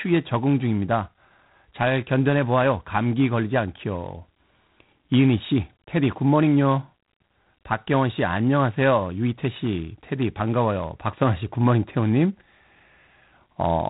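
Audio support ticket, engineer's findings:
G.726 ADPCM throughout, plainly audible. Harsh rasping hiss riding on the speech, rising and falling with its level. Nothing above 3.9 kHz. Sounds like the 24 kbit/s mode: three bits a sample of prediction error, so quantisation noise tracks the signal.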